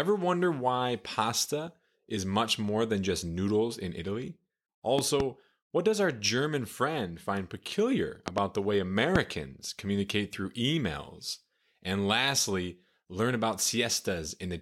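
Three bursts of loud pops cut through this speech. At 4.99 to 5.22 s, just before "what does our", there's a quick double pop, about 15 dB over the voice. At 8.28 to 8.40 s, between "friend find peculiar" and "the way", comes another pair, about 20 dB up. A single, equally hard pop lands at 9.16 to 9.18 s, right before "communicate through emails". The speech runs on underneath each one, likely from a brief voltage spike such as a switch, plug or static discharge.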